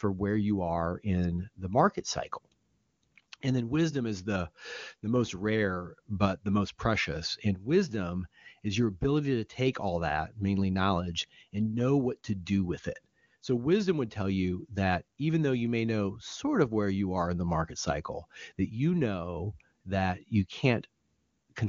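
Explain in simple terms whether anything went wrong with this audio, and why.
Nothing went wrong with this speech recording, and no faults can be heard in it. It has been carried by the AMR wideband (HD Voice) phone codec, and at the high-quality setting used here the speech stays clear, with at most a faint trace of the coding.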